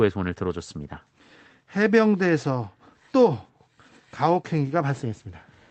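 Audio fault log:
Nothing stood out on listening to the speech here, which comes over a WebRTC call path in the usual way.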